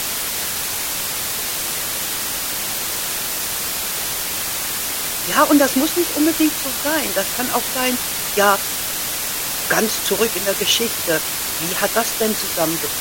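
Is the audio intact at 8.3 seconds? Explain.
No. At 8.3 seconds the speech is affected by low bit depth with dither, which runs through the entire clip rather than at that moment alone. The samples are rounded to only 4 bits, and dither noise is added before rounding, so the quantisation error is turned into steady white noise instead of distortion. The result is a constant, even hiss that sits only slightly below the speech level, with no grittiness or crackle.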